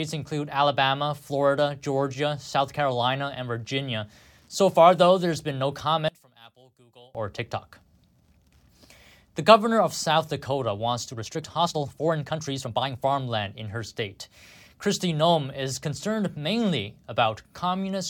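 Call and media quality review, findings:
Speech collapses to a faint residue, 6.08–7.15 s, right after "though there's been no"; level down about 25 dB. Likely one channel inverted: polarity-reversed leg cancels the shared centre content on mono summing, leaving only the inter-channel difference.

Delivery turns abruptly rushed, 11.04–13.20 s, ending just before "in her state"; pace roughly 1.43 times normal, pitch unchanged. Likely a time-stretched section: squeezed to fit a length by dropping short slices while holding pitch.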